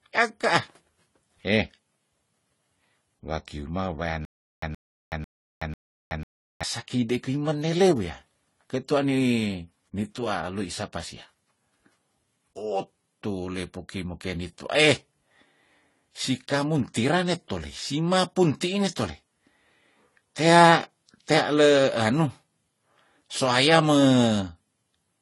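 Throughout, the speech likely passed through one lossy codec and was then re-encoded in a second, so transcoding between lossy codecs stacks the artefacts of both codecs over a band with nothing above 11.5 kHz.

From 4.25 to 6.63 s, the stream likely stalled and replayed its last fragment, giving stutter with silent gaps: a 123 ms burst repeats four times, separated by 373 ms of digital silence.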